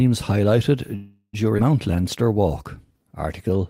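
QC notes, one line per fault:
0.95–1.35 s, call audio freeze: the sound stalls for about 0.4 s, the last fragment carried on as a fading buzz or hiss that reaches about 50 ms of silence. It then resumes exactly where it stopped, so nothing is lost. Likely late packets draining the jitter buffer.
1.57–1.60 s, skip ahead: playback jumps forward with only about 9 ms of filler, dropping roughly 150 ms of audio and splicing the two sides together almost directly. Unlike the freeze before it, there is no pause, just a sudden missing piece.
1.91–2.49 s and 2.93–3.59 s, jitter buffer slow-down: repeated pitch periods stretch the sound to 87% and then 90% speed, adding 84 ms and 78 ms. Pitch stays the same, with drawn-out sounds, not a stop or a jump.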